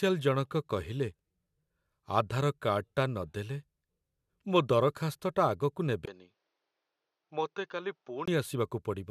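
From 6.06 s to 8.28 s the recording likely had its input switched to a poorer device, with the system changing to another microphone or a headset's call profile partway through. At the switch the speech drops out for about 20 ms, then returns narrower and duller, with nothing above 6.7 kHz, so the upper sibilance and air disappear. The speech also comes in somewhat quieter, over a new, faint background noise that sits well below it, before the original fuller sound comes back at 8.28 s.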